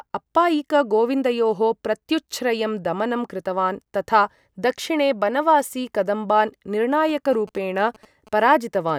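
From 7.09 to 8.91 s, a nearby 2G phone's GSM signalling bursts are rectified by the audio circuitry, adding a galloping dit-dit-dit of short 217 Hz buzzes roughly 25 dB below the speech.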